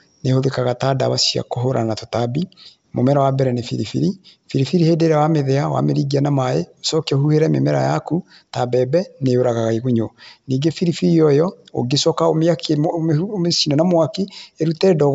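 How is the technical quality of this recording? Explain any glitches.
The technical quality is good and there are no glitches to explain; the speech comes through G.722 wideband telephone coding at 64 kbit/s, which carries nothing above about 7.8 kHz.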